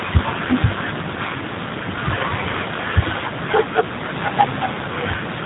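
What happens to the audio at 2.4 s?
At 2.4 s, as throughout, the speech shows plain G.729 codec damage. Rebuilt at about 8 kbit/s, it loses everything above 4 kHz and sounds rough and synthetic.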